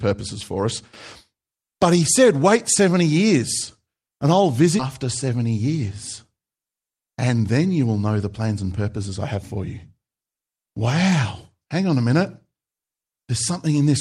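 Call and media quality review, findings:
Skip ahead, 4.79–4.81 s: about 0.7 s of queued speech dropped in transit or by jitter buffer overflow, cutting playout delay. Playback jumps forward with no gap; both sides spliced directly.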